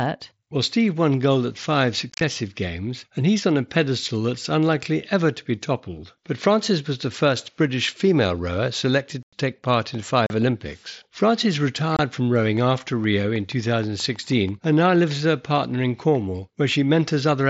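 Unconcealed Bluetooth headset packet loss drops voice packets between headset and phone, and nothing fills the gaps, so the speech cuts to silence with hard edges. At 2.10 to 2.21 s, after "won gold at five" and before "games and he's on", about 75 ms goes missing in scattered bursts, the longest 30 ms, which sounds chopped. At 9.23 to 9.33 s, between "female rower selected" and "take part in", almost 100 ms drops out. Shorter holes follow at 10.26 to 10.30 s and 11.97 to 11.99 s.

From 12.57 to 15.12 s a train of clicks, likely interference from nearby equipment, injects about fifteen evenly spaced pulses at 6.3 per second. They reach about the level of the speech and tick steadily up to "with her partner in", through the mSBC wideband audio.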